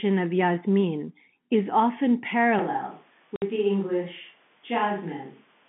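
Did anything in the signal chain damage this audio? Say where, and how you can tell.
Yes. From 2.59 s, after "is often", the sound turns hollow and roomy, about 5 dB quieter, until the end. A switch to a distant microphone is likely.

Network packet loss filled with silence leaves a 60 ms gap from 3.36 to 3.42 s, with hard edges. That fits three 20 ms packets.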